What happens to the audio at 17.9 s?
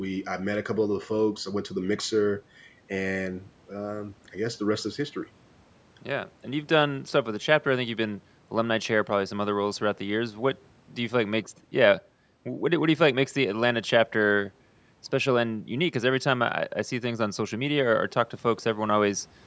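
Nothing goes wrong at 17.9 s: the speech carries on intact through that moment, with only the ordinary band limit of call microphone processing.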